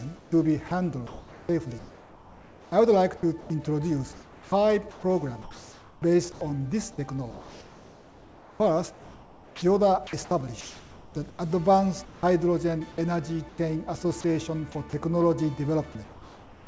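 Comfort noise in place of the background runs from 0.17 to 6.41 s: about 2.8 s of the real background becomes smoother, steadier synthetic noise, likely because the sender's detector paused transmission and the receiver synthesised filler. At 0.68 to 0.71 s, sound dropped by the voice detector removes 30 ms, likely with quiet sound heard as background and swapped for noise. From 7.31 to 12.23 s, sound chopped by the voice detector makes the audio choppy, likely from the sender toggling transmission repeatedly, so roughly 2.9 s of edges and quiet passages become comfort noise. Comfort noise returns from 13.49 to 14.24 s, briefly replacing about 120 ms of background. Inside it, at 14.21 to 14.24 s, another drop by the voice detector loses about 20 ms of sound. From 16.04 to 16.67 s, comfort noise again stands in for the background, which sits about 25 dB below the loud parts. The filler is about 3 dB quieter and flatter. 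Throughout, nothing is heard above 8 kHz, which fits a G.722 call path at 64 kbps.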